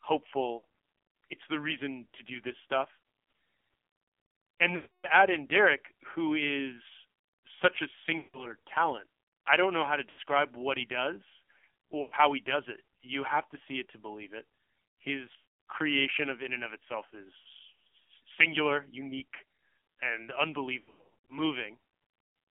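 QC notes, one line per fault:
Throughout: AMR narrowband mobile codec at 5.9 kbps, heavy damage. Speech is confined to roughly 250 Hz–3.4 kHz and sounds buzzy and synthetic, because the low bitrate rebuilds each frame from a crude vocal-tract model driven by only a few pulses.
0.58–21.38 s: lost AMR speech frames at 0.58, 4.76, 8.18, 10.1, 12.02, 15.36, 17.38 and 20.8–21.38 s. The decoder replays the last pitch and vocal-tract settings at falling gain, so short losses warble briefly. The 280 ms loss at 4.76 s drags and fades, and the final stretch breaks up repeatedly.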